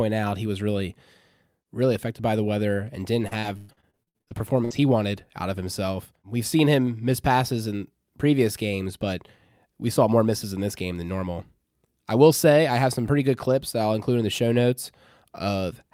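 From 3.21 to 4.82 s, between "by the weather and" and "wanted out of himself", repeated packet loss breaks the speech into a dozen or so holes, the longest 118 ms. Concealment stretches the last sound across about a third of the span, giving a choppy, robotic texture.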